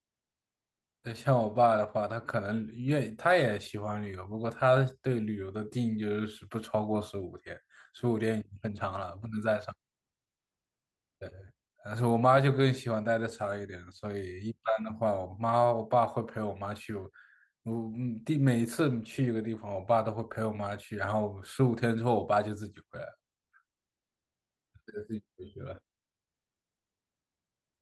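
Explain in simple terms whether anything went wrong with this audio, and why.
Nothing went wrong here; no faults can be heard.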